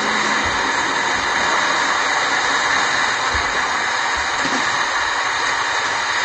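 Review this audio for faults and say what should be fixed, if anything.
AAC compression runs throughout: nothing survives above 9.7 kHz, and the sound has a smeared, warbling texture that likely comes from a low-bitrate AAC-LC encode, consistent with roughly 32 kbps. Unlike a plain low-pass filter, the coder also smears detail below the cut-off. Encode at a higher bitrate or keep a lossless master.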